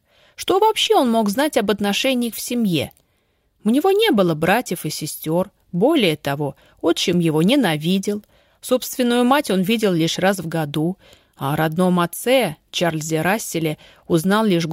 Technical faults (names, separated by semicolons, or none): none